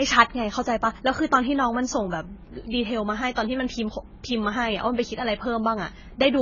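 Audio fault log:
Throughout: AAC compression. The speech sounds dull and smeared, with nothing above 7 kHz and a warbling, fizzy edge on sibilants. That points to heavy low-bitrate coding, likely AAC-LC at around 16 kbps, where the encoder drops the top band and thins out what's left.
3.35 s: pre-echo. Just before a sharp attack there's a brief hiss, about 16 ms of it, and the onset comes across softened. The codec spread its quantisation noise across the whole block, so noise meant for the loud hit leaks ahead into the quiet gap.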